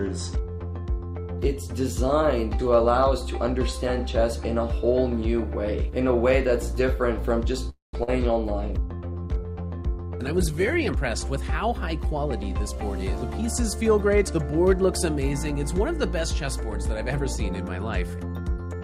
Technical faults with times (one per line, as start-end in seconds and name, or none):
7.69-7.95 call audio freeze
8.03-8.09 short concealed packet loss
8.61-11.03 call bitrate drop
12.15-13.43 jitter buffer speed-up
18.40-18.81 jitter buffer speed-up